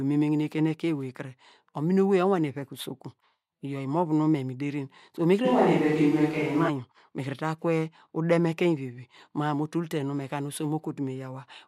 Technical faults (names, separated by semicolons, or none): switch to a distant microphone